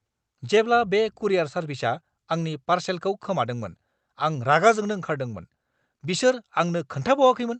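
The sender's clock runs roughly five percent fast against the receiver's, a clock drift between sender and receiver that keeps overfilling the jitter buffer in this speech clip. Repeated timing corrections from 0.03 to 7.48 s trim short pieces at uneven intervals, so the speech plays at 105% speed, over an Opus call path limited to about 8 kHz.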